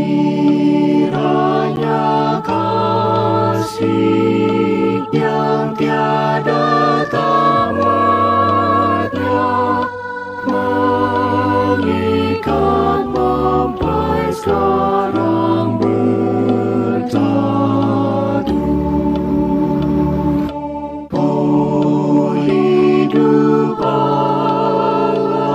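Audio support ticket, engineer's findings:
Block of digital silence at 1.76 s: 10 ms dropout, heard as a tick or dip. Samples zeroed with no fade, so the edges are hard. Probable component: output buffer not filled in time by the audio process, or invalid values zeroed.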